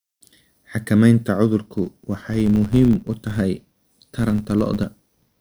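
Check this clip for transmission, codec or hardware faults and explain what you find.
One processing fault is present. From 1.78 s to the end, a filter restarted on every block drops its state at each boundary, producing transients heard as a level-following buzz near 93.8 Hz, which fits a 512-sample buffer.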